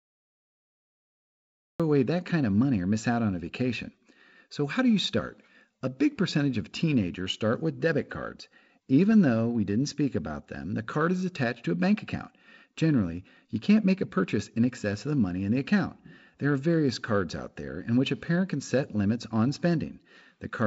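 The clip opens with a cut-off start. From 0 to 1.80 s there is only digital silence. At 1.80 s the speech appears abruptly, already in progress. There is no natural attack and no fade-in. Whatever came before that point was never captured, because recording began late. The jump from silence to sound marks the cut. Through the wideband telephone coding, the speech has nothing above 7.7 kHz and a light coding grain that fits G.722 at 48 kbit/s.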